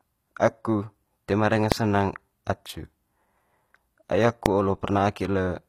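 Throughout, the treble sounds gritty and lispy, plainly damaged, likely from HE-AAC compression at a low bitrate near 24 kbps. Its upper bands look copied and smeared on a spectrogram. Just after "toe ma danga" at 1.72 s, and again at 4.46 s, invalid numbers at full scale produce a single sharp bang. Each appears as a 0.73 ms flat spike far beyond the speech peaks on the waveform, which fits a 32-sample block.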